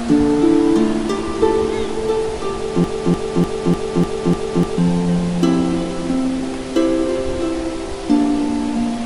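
From 2.84 to 4.78 s there's a broken-record loop: one 0.3 s snippet replays six times, likely a stalled stream, swallowing whatever should've played.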